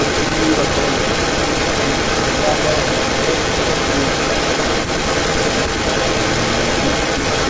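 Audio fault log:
Throughout, echo leak: a second copy of the speech trails the original by about 300 ms for the whole clip, and it sits roughly 5 dB above the direct speech. That's most likely a far-end speakerphone whose echo canceller didn't strip out what its mic heard and sent it back. Both copies stop around 8 kHz, as you'd expect from a G.722 call.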